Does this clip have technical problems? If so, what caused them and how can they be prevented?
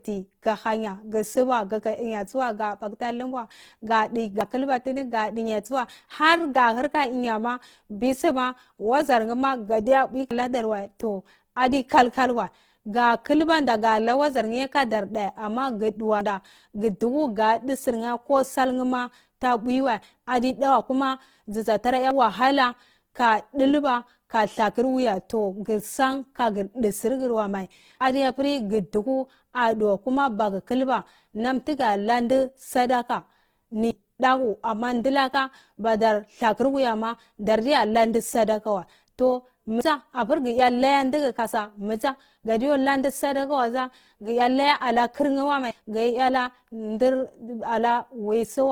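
Yes. Throughout the speech there is a rough, grainy texture on voiced sounds, with a noisy fizz in place of clean harmonics, although the top end stays open. This is likely Opus compression in its music mode at a low rate, around 16 kbps, where bands the encoder cannot afford are filled with folded or noise-like content. Encoding at a higher Opus bitrate, or keeping an uncompressed copy for processing, would prevent this.

The speech also jumps forward abruptly at 4.41, 10.31, 16.21, 22.11, 28.01, 33.91, 39.81 and 45.71 s. Each time, roughly a tenth of a second is lost and the two sides are butted together. This regular spacing of about 5.9 s likely comes from audio missing between chunks, which fits a recorder that drops a slice each time it closes one 6-second chunk and opens the next. Overlapping or seamlessly buffered chunk handoffs would prevent these skips.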